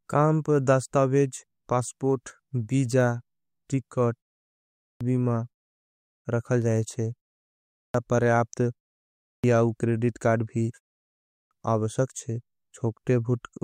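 The output device drops into a low-power state during each short pause of about 0.3 to 0.4 s and needs time to wake, so the resumed speech loses its opening. This clipped start after a pause occurs at 4.52, 5.82 (before "रखल जाये"), 7.54, 9.03 (before "आउ क्रेडिट कार्ड भी") and 11.03 s (just after "आउ क्रेडिट कार्ड भी"), each swallowing 0.40 to 0.49 s, so speech bursts in abruptly from silence missing its first sounds.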